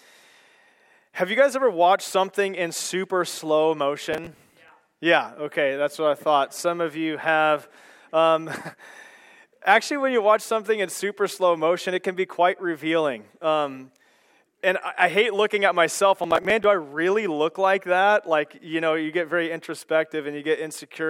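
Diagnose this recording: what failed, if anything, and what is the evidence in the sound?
Processor overload crackle at the driver/buffer stage: from 4.13 to 4.69 s, and again from 16.24 to 16.64 s, a gritty tearing rides on the sound and then stops cleanly. The processor missed deadline after deadline, and each missed buffer replayed a stale chunk of old audio with hard edges. The spacing suggests buffers of around 10 ms. On a spectrogram, dense vertical broadband stripes mark each burst. The waveform shows step discontinuities and short repeated segments.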